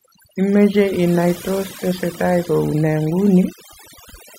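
A speech recording with overdone noise removal running through the whole clip. The noise reduction was set too strong. It cuts frequency bands hard wherever they sit near its noise estimate. The background drops and breaks up into twinkling specks.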